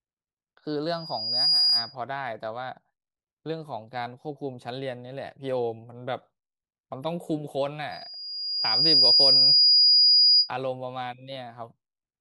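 Loudspeaker feedback squeal breaks into the speech twice, both times at 4.9 kHz. From 0.92 to 1.96 s, a thin tone swells over about half a second. It settles well above the speech, by roughly 10 dB. From 7.91 to 10.51 s the same tone returns. It builds more slowly, over about a second, and climbs to roughly 15 dB above the speech. The microphone is hearing its own loudspeaker. At 4.9 kHz the loop gain passes one, so that frequency feeds itself.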